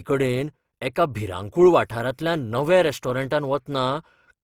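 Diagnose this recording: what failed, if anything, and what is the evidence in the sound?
Grainy, rough speech throughout, its tones turned noisy while content reaches 20 kHz: likely Opus compression in the codec, music mode, fitting about 24 kbps.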